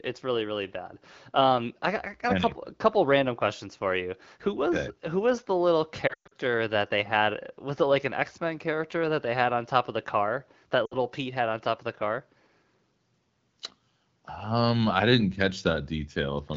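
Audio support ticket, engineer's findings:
Lost AMR speech frames at 6.08–6.34 s, after "who was the little", before "that they": 180 ms lost across 240 ms, longest gap 120 ms. A second loss at 10.86–10.95 s drops 60 ms. The decoder conceals each gap by repeating the last good parameters with falling gain. On a spectrogram the bands smear, then go near-blank. On the waveform the envelope collapses. The AMR-WB path sounds consistent with the 12.65 kbit/s mode.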